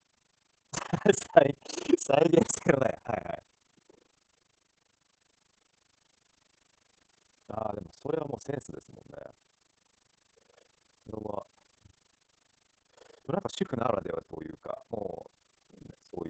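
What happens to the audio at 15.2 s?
The speech at 15.2 s carries Opus voice compression, the same as everywhere else in the clip. It goes through the SILK speech coder in wideband mode with heavy damage, so nothing is left above about 8 kHz and the excitation is coarse. That gives a muffled, hoarse, slightly robotic tone, which fits a bitrate down around 10 kbps.

Overlap-add ripple is also there from start to finish. The frames were rejoined with an overlap that doesn't sum evenly, so the level dips by as much as about 60 dB roughly thirty times a second. It comes across as a rough, fast flutter.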